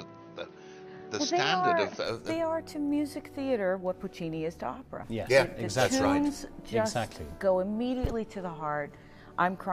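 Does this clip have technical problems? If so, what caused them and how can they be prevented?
Yes. From 0.0 to 2.04 s the sound is band-limited, with nothing above 6.3 kHz, then opens up with no gap or level jump, likely from the input switched to a poorer device. Locking the input device before recording prevents this.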